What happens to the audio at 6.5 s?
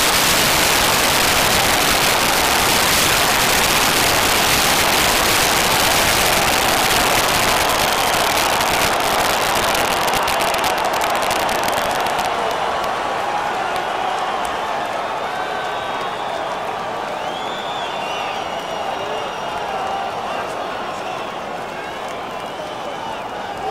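At 6.5 s the audio is affected by integer overflow, which runs through the whole clip. The signal is driven about 10 dB past full scale, and instead of clipping, the few percent of peaks that exceed the limit wrap to the opposite sign, producing violent, sharp cracks on loud passages.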